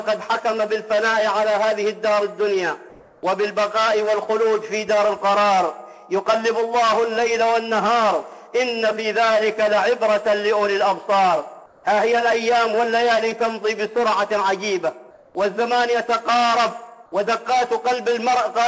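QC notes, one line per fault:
2.90–3.23 s, 11.66–11.84 s, 15.11–15.35 s: comfort noise in place of the background. The sender likely stopped transmitting in these quiet gaps, so the receiver filled them with synthetic noise. The real background, about 30 to 34 dB below the loud parts, turns to featureless hiss for 330, 180 and 240 ms, and is about 5 dB quieter at 11.66 s.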